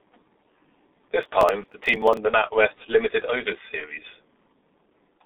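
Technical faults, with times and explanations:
throughout, G.723.1 codec: a 6.3 kbit/s telephony codec with 30 ms frames removes everything above 3.8 kHz and models the voice coarsely, leaving speech muffled, hoarse and smeared on consonants.
1.23–2.17 s, processor overload crackle: the processor repeatedly misses its deadlines for short buffers, around 5 ms each, and skips them, so dozens of hard-edged gaps tear the speech into gritty crackle.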